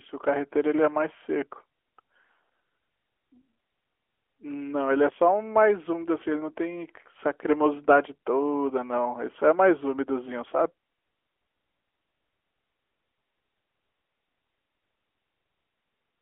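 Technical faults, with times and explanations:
No technical faults can be heard in the speech. The AMR narrowband mobile codec path is audible as a telephone band of roughly 300 Hz to 3.4 kHz with only light codec colouring, which fits its highest 12.2 kbps mode.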